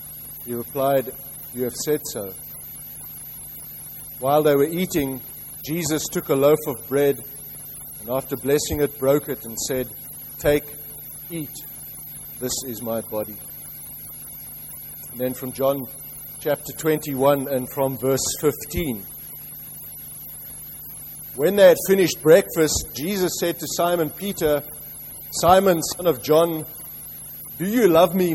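No technical faults are audible.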